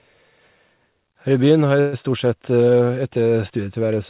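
At 1.80 s the speech stalls in a call audio freeze lasting about 0.15 s. The last sound is stretched into a fading buzz for about 126 ms, and at 1.95 s the speech resumes exactly where it stopped, now running about 126 ms late. The likely cause is delayed packets leaving the jitter buffer empty. On a spectrogram, capped at 4 kHz by the G.711 path, this appears as a smeared, fading horizontal band. The waveform shows a decaying, repetitive envelope.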